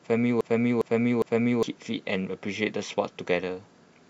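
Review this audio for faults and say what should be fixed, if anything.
From the start to 1.63 s, a 0.41 s fragment of speech repeats back to back as a broken-record loop, already under way at the start; a stalled player or stream likely kept resending its last buffer. Fix this by rebuffering on stalls instead of replaying held audio.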